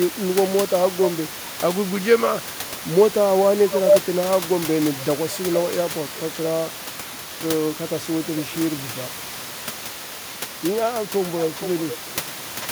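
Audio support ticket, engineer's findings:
Echo leak, likely far-end loudspeaker pickup not cancelled by its echo canceller. Delayed copy of speech returned about 0.43 s late, 2.35–4.21 s, strong, near speech level; then 4.37–12.68 s, about 0.44 s late, much fainter. Room noise sits about 12 dB below speech.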